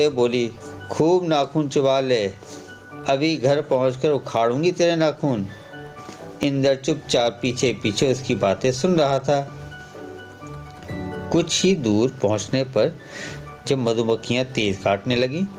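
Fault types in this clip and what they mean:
gain pumping: the gain swings about 20 dB, pulled down under each loud sound, likely an overdriven input hitting a fast limiter.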